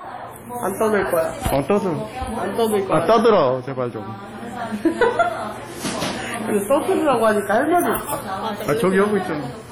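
Throughout these sounds, heavy ringing, washy smearing and signal-following hiss are likely WMA compression, fitting a low bitrate around 32 kbps.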